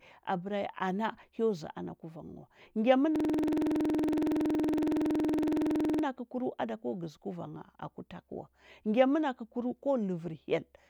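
Speech, with a system hang loop from 3.16 to 6.04 s: one 46.4 ms fragment repeats at 21.5 Hz as a rapid stutter, consistent with a frozen 2048-sample ring buffer.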